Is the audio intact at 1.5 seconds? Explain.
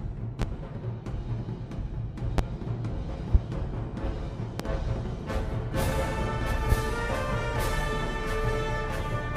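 Yes, at 1.5 seconds the audio is intact, with no dropout, click, distortion or other fault to be heard at that point.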